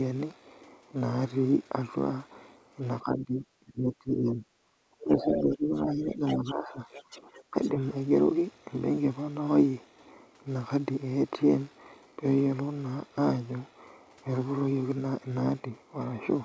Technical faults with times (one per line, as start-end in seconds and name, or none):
3.00-4.49 speech suppressed in double talk
5.00-5.04 other side's voice leaking through
5.03-6.81 speech suppressed in double talk
6.15-6.51 other side's voice leaking through
6.92-7.70 other side's voice leaking through
7.11-7.21 speech suppressed in double talk
7.51-7.55 speech suppressed in double talk